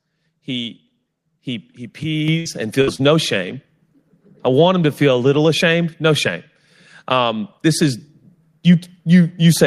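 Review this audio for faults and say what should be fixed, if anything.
At 2.28 s, right after "he he", the voice and the background noise jump up together by about 6 dB in a single step, with no fade. This is the microphone volume stepped up: the call software judged the input too quiet and raised the device's input volume all at once, so everything the microphone picks up gets louder at the same moment. To prevent it, fix the input level before the call and turn off automatic microphone gain adjustment in the call software.

There are two bursts of packet loss. In each, the sound stops moving forward and the last sound is held and faded out, as a steady buzz or a dimming hiss, before the audio jumps ahead. The first runs from 2.39 to 2.47 s, just after "he he", with 60 ms filled and 60 ms of audio lost. The second runs from 2.81 to 3.01 s, with 58 ms filled and 60 ms lost. In both, packets arrived too late or not at all, and the receiver had to cover the gap. 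To prevent it, use a more stable network path and a larger jitter buffer so late packets can still be played.

Inside the second burst, from 2.95 to 3.00 s, there is a short concealed packet loss. It sounds like a brief smear or wobble rather than a clear dropout. About 20 ms of audio never reached the decoder in time, and the receiver filled 30 ms by extending the preceding sound and then blending back into the real signal. To prevent it, enable forward error correction in the codec so that small losses can be rebuilt.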